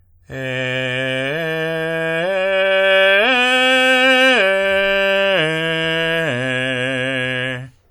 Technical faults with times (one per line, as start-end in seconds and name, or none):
0.00-7.91 WMA compression